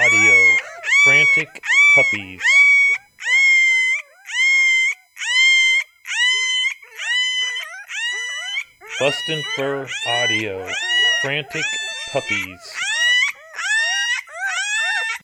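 A faint, fixed-pitch whine runs throughout, pitched at 1 kHz and strongest at 5 kHz: USB whine, 1 ms bus frames leaking in through power or ground.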